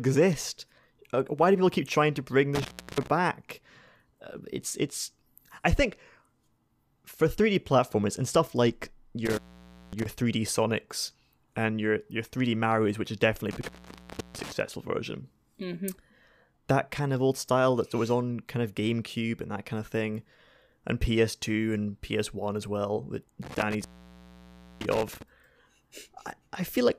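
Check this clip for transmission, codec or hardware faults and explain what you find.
There is a hardware fault: an intermittent contact, heard four times in this speech clip, at 2.55–3.07 s, 9.25–10.06 s, 13.51–14.52 s and 23.43–25.22 s. A loose connector briefly breaks the signal path, opening for about 0.33, 0.55, 0.66 and 0.97 s. The audio drops out with crackle at each edge, leaving faint hiss during the gap.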